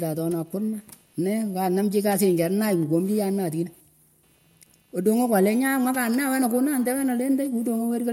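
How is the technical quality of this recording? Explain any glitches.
The recording carries computer activity noise throughout, a buzz with a pulse rate of roughly 300 Hz, sitting far below the speech at roughly 45 dB down. It comes from processor or graphics load shifting the ground the audio circuit shares. Unlike steady mains hum, it rises and falls with what the computer is doing, not with the speech.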